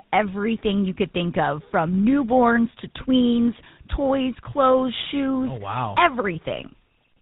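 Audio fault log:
Throughout: tandem speech coding. The speech sounds rough, muffled and warbly, with nothing above 3.8 kHz, as if it went through two speech codecs in a row. The second coder, likely GSM full rate, is working on the first one's already degraded output.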